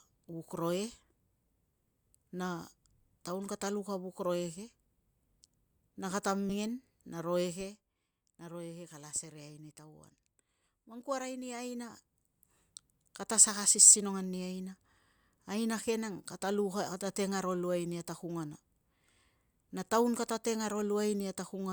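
In this speech clip, whole compressed frames were skipped at 6.49–6.54 s, either missing from the file or rejected by the decoder as damaged, which fits a 20 ms frame length. Around 70 ms of speech vanishes, roughly three frames.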